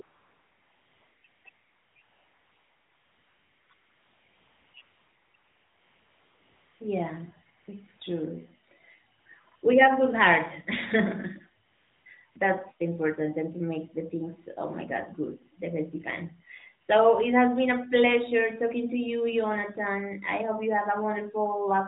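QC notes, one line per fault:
0.02–12.36 s, AMR comfort noise, 14 times: the phone's voice detector judged the talker silent and stopped sending speech frames, so the receiver substituted smooth synthetic noise built from a rough estimate of level and spectrum. The real background therefore drops out and a steady hiss switches in. Runs last up to 1.68 s before 6.8 s, shrink to brief 20–100 ms patches between 7.58 and 9.62 s, then return at 11.68–12.06 s and briefly at 12.32 s. All of this sits on 12.2 kbps AMR-NB audio, band-limited to 4 kHz.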